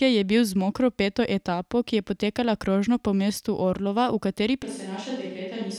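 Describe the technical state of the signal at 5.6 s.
At 5.6 s we're on a switch to a distant microphone, running from 4.63 s to the end. The speech turns hollow and roomy, drops roughly 5 dB, and picks up faint room noise, likely because the close mic dropped out.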